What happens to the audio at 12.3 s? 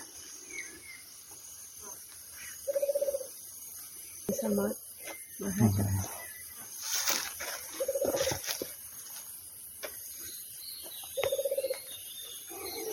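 At 12.25 to 12.27 s the audio has chunks out of order. One 10 ms chunk arrives a single chunk late. It plays after the chunk that should follow it. Nothing is missing, but the two short pieces are swapped. The swap creates three hard joins in a 20 ms window. Each join is a sudden jump in the waveform. The result is a brief jumbled stutter.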